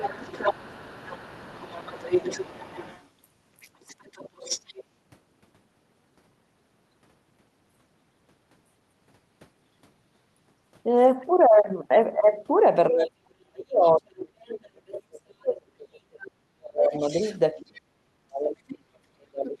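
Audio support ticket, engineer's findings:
Other side's voice leaking through: echo canceller likely leaving residual loudspeaker pickup in the mic path. A second voice sits about 15 to 30 dB under the talker at 0.00–3.08 s, 3.60–4.84 s, 12.99–13.04 s, 14.93–14.99 s, 16.93–17.38 s and 17.60–17.80 s.

Speech suppressed in double talk: canceller likely misreading simultaneous talk as echo and attenuating everything. The talker's level dips in pieces during 12.89–17.05 s and 17.52–19.60 s, bottoming out around 40 dB down while the far end is active.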